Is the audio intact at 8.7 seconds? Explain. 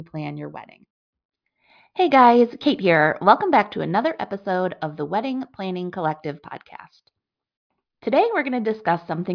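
Yes, the audio is intact at 8.7 seconds, with no dropout, click, distortion or other fault at that moment.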